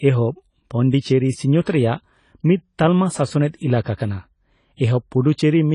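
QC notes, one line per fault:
Throughout: low-bitrate audio saved at a high bitrate. The speech stops dead at 10 kHz and carries the artefacts of a heavily squeezed encode, yet it's sitting in what looks like a roomy 320 kbit/s MP3. That combination points to a low-rate AAC source, something around 24 kbit/s, that was likely re-encoded at a generous bitrate. The second pass can't bring back the detail the first one threw away.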